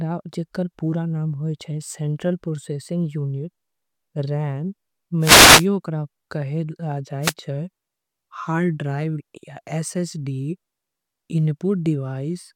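Two wireless microphone noise hits, at 5.20–5.67 s and 7.22–7.33 s: the FM radio link fades, letting receiver noise surge through as brief swishes of static over the speech.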